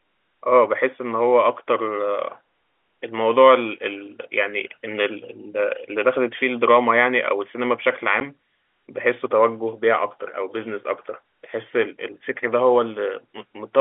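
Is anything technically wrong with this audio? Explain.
Yes. At 8.2 s the speech has a short hole from packet loss filled with silence. A block of audio never reached the receiver, and instead of concealing it the decoder played zeros for its duration. The gap is about 10 ms, which points to a single lost 10 ms packet. The signal drops abruptly to nothing and returns just as abruptly, leaving hard edges on the hole in the narrow telephone-band G.711 audio.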